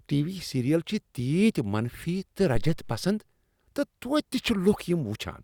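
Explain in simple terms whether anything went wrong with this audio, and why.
At 2.55 seconds a deep, dull thump cuts into the speech, like something knocking against the microphone. It dies away within about a tenth of a second, and its low rumble trails off by 3.03 seconds. This is a phantom power thump. Phantom power, which feeds the microphone, was switched on or off while the input was live. That sudden jump in voltage passed through the circuit and came out as a single low boom.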